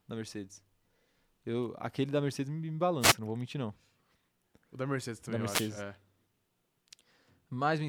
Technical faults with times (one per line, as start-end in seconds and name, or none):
3.00-3.15 wireless microphone noise hit
5.47-5.70 wireless microphone noise hit